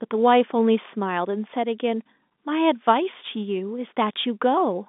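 No technical faults occur at any point in the speech, which carries the narrow band of an ordinary telephone line with nothing above 3.8 kHz.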